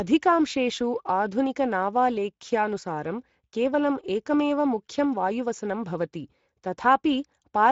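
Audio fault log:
throughout Speex codec. The speech sounds plainly noisy and hoarse. This CELP coder models the voice, then spends its few bits on the excitation signal. Too few bits leave that excitation rough, and the damage fits a bitrate near 17 kbps.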